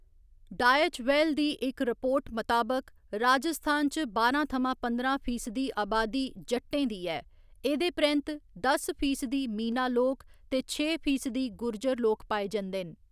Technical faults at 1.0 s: none

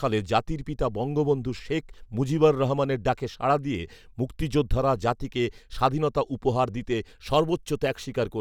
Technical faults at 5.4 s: none

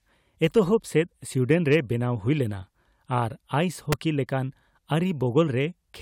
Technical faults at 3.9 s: electrical switching spike

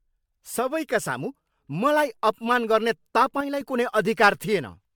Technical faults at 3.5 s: generation loss; one channel drops out

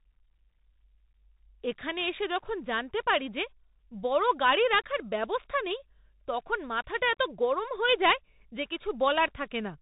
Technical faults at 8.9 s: Bluetooth CVSD headset codec

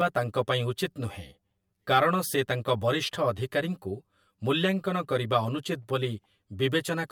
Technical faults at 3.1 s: channel delay (comb filtering)

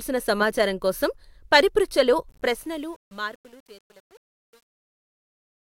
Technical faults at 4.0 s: truncation distortion on a fade

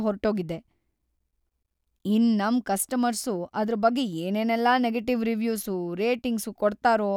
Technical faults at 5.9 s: none

